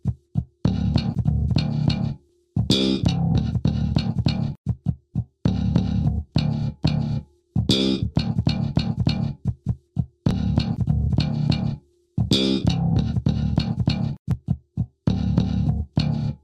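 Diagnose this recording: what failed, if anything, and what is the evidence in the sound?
Overlapping chunks at the buffer stage: the audio was handled in 4.0-second blocks, and each block began about 6.5 ms before the previous one finished, so that sliver plays twice at every join. The evidence is a brief click or stutter at 2.29, 6.30, 10.31 and 14.31 s, spaced about 4.0 s apart. That regular spacing points to a fixed chunk boundary rather than a random dropout.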